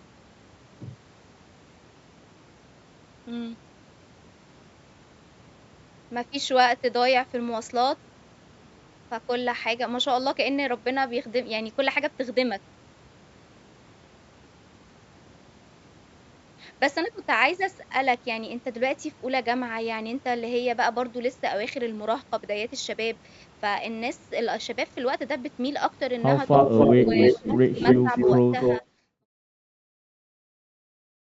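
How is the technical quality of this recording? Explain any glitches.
There's a rough patch near the end, where an echo problem and some double-talk ducking overlap just before the fade-out.

Echo leak, 26.53 to 28.86 s: a second copy of the speech trails the original by about 288 ms, at roughly the same loudness. The likely cause is a far-end speakerphone whose echo canceller let its loudspeaker pickup slip back into the call.

Speech suppressed in double talk, 27.05 to 27.57 s and 28.02 to 28.12 s: the speech ducks while that echo overlaps it, by about 15 dB in the first spot and about 5 dB in the brief second one, so words thin out or partly vanish. It's likely the canceller turning everything down when it couldn't tell the talker from the echo. The second dip lands as the smooth fade-out begins, around 28 s.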